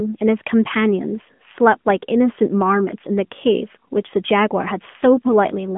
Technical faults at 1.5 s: AMR narrowband mobile codec

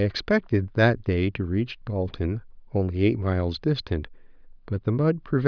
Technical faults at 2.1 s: none

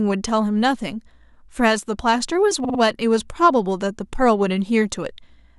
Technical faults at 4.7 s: none

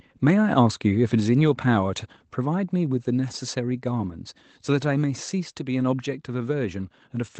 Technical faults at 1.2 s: microphone volume stepped down

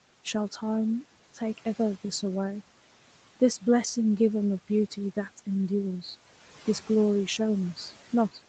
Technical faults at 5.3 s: none

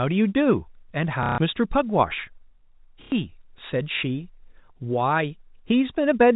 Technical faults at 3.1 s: packet loss with last packet repeated

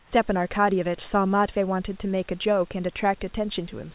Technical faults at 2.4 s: none

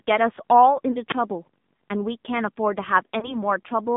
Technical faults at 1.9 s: filter restarted on every block; AMR narrowband mobile codec

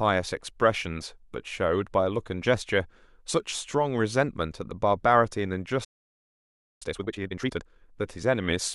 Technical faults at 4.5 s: none

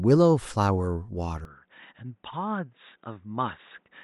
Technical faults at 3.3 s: input switched to a poorer device

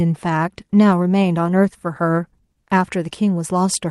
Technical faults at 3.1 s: short concealed packet loss

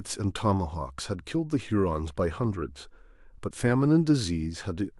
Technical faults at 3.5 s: compressed frames skipped

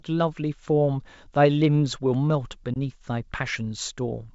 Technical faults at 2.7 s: packet loss on an ADPCM call

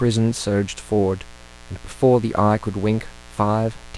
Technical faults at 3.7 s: mains buzz

